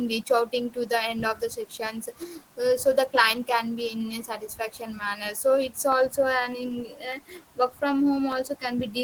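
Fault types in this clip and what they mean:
Clock drift buffer slips: A click pops up every 0.6 s, steady as a metronome, from about 0.52 s to 8.93 s, roughly fifteen ticks sitting on top of the speech, with quiet room noise underneath. It's likely two devices on separate clocks disagreeing by something like 300 ppm, so the buffer between them creeps until it has to drop or repeat a handful of samples. Each correction makes one tick.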